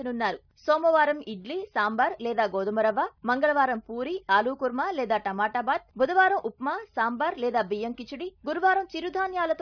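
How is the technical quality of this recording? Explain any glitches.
Nothing here stands out as a glitch; it runs smoothly the whole way, with no dropouts, clicks or other interruptions to point to.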